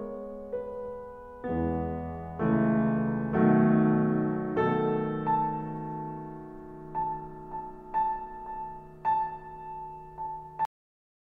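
A music recording with a cut-off end: at 10.65 s the sound stops mid-note and drops straight to digital silence with no decay, because the final buffers were never written out. A waveform shows a flat line from there to the end, and a spectrogram goes blank across all frequencies.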